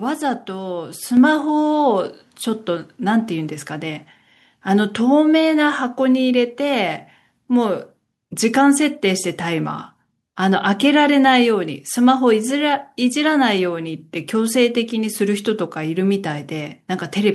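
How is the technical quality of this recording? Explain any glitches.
The recording has one clear glitch. At 1.17 s the microphone volume steps up. The level jumps by about 4 dB in a single move. Some gain control decided the input was too quiet and raised the device's input volume at once, not gradually. Because the change happens before any processing, the voice and the background noise get louder together. You hear an abrupt lift in loudness, with the room sound rising along with the speech.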